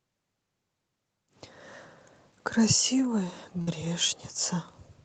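A burst of packet loss hits this speech clip carried over a WebRTC-style Opus call path. Around 3.61 to 3.69 s, consecutive packets failed to arrive, so the receiver stretched the last sound for about 56 ms while fading it, then resumed with roughly 60 ms of speech gone.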